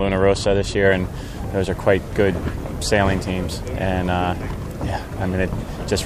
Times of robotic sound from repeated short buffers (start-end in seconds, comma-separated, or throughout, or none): none